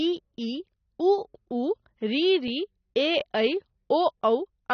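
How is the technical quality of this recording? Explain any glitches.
The recording is plainly degraded by lossy compression throughout, and there is one brief glitch near the end.

AAC compression runs through the whole speech clip. Nothing is present above 6.3 kHz, and sibilants carry a fizzy, warbling texture. That points to AAC-LC at a low bitrate, likely around 24 kbps, quantising coarsely against its hearing model. A simple low-pass filter would sound dull but clean, without that shimmering smear.

Overlapping chunks cause a single stutter at 3.21 s. A new processing chunk started before the previous one finished, so 20 ms of audio plays twice at the join, which fits 2-second chunks. It is a repeat of material, not a silence, which sets it apart from a dropout.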